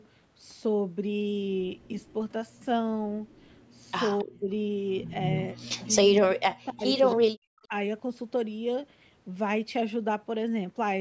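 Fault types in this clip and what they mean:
Echo leak: brief, faint repeats of the speech trail the original by about 270 ms, roughly 30 to 40 dB down, near 4.2, 7.1 and 7.6 s, likely residual loudspeaker echo the canceller missed. A spectrogram shows weak, smeared copies of harmonic patterns shifted later in time.
Speech suppressed in double talk: between about 4.2 and 7.7 s the speech repeatedly dips or drops out in pieces, by as much as roughly 40 dB, likely an echo canceller muting this side while the other talks. The waveform shows sudden envelope holes, and the spectrogram shows blank columns.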